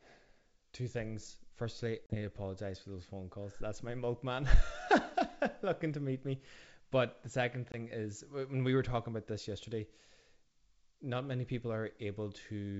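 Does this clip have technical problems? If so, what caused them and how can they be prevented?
Yes. Packet loss on an ADPCM call cuts hard-edged holes at 2.06–2.16 s, before "need to apologize for", and 7.72–7.75 s, between "the second" and "is when we were". About 40 ms and 20 ms go missing, and the decoder's predictor and step size lose track of the sender's, so speech resumes distorted before settling. Packet loss concealment with predictor state reset, or forward error correction, would prevent it.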